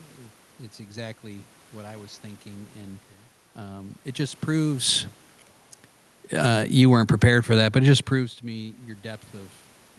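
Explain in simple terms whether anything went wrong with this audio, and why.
Automatic gain falling: from 6.3 to 7.4 seconds the volume control judged the input too loud or too noisy and turned it down, so speech and background drop together.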